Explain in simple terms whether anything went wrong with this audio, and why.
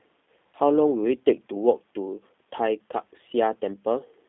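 The speech carries G.729 codec damage from start to finish. Sound above about 3.6 kHz is gone, giving a phone-line tone. Unlike simple phone filtering, it also sounds slightly rough and synthetic, because the codec rebuilds speech from a compact model instead of sending the actual sound.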